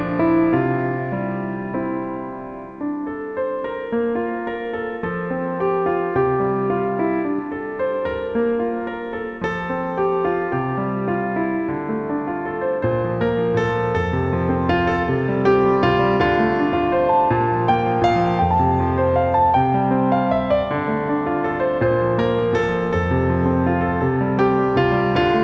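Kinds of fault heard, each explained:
Short concealed packet loss: around 7.36 to 7.40 s, 20 ms of audio arrived too late and the receiver extended the preceding sound to cover it, heard as a brief smear. A spectrogram shows a blurred slice; the waveform there looks copied from just before.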